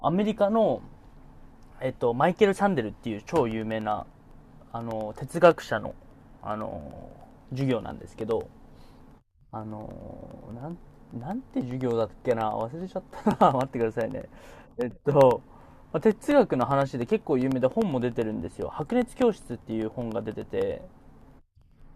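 Periodic USB or driver dropouts hit this speech from 3.51 to 21.82 s: every 0.1 s a background task stalls the audio path, silencing a fraction of a millisecond and producing steady ticks wherever sound is present.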